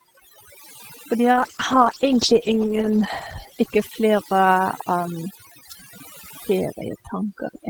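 Overdone noise removal runs throughout: an aggressive noise reducer pulls individual frequency bands down whenever they sit near its noise estimate, so the background collapses to near silence with twinkling specks, while quieter parts of the speech are stripped away.

A call bitrate drop runs from 1.32 s to 4.87 s. The sender's bandwidth estimate fell and the encoder was starved of bits. Coarser coding and lost high frequencies make the speech rough and muffled, which fits a fall from about 32 kbps to around 10 kbps. It sits at its worst for roughly 1.7 s before recovering.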